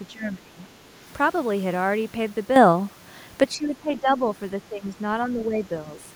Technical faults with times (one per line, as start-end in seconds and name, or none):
0.07-0.61 speech suppressed in double talk
2.56-3.44 sudden gain jump
3.56-4.26 speech suppressed in double talk
4.69-4.98 speech suppressed in double talk
5.29-5.60 speech suppressed in double talk